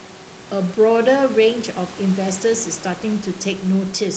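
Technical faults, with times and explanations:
Nothing here counts as a technical fault: the faint room noise sits about 21 dB below the speech, and the call processing and codec path, which cap the top end around 8 kHz, are doing their ordinary job.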